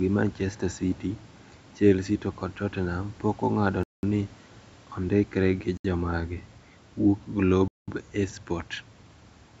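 Playback most likely stalled when the Bluetooth link's buffer ran dry while delayed packets were resent. Each Bluetooth stall cuts the speech to silence and then resumes: from 3.83 to 4.03 s, from 5.77 to 5.85 s just after "ondikre gi", and from 7.68 to 7.88 s.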